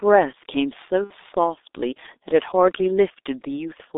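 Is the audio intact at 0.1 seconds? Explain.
No. At 0.1 s the speech is already passing through a G.723.1 codec, which runs the whole clip: roughly 6.3 kbit/s, sound confined to about 300 Hz to 3.7 kHz, and a voice model updated only every 30 ms frame. That heavy coding leaves it muffled and hoarse with smeared consonants, whereas simple telephone band-limiting would stay dull without smearing consonants.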